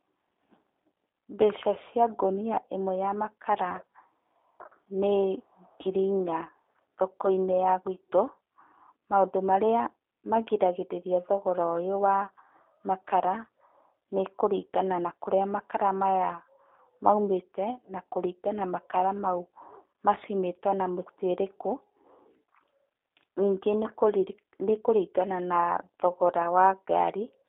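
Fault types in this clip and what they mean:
G.729 codec: throughout, speech is confined to 300 Hz–3.6 kHz and rebuilt from a vocal-tract filter plus sparse pulses, sounding plainly rough and synthetic, which points to 8 kbit/s G.729A.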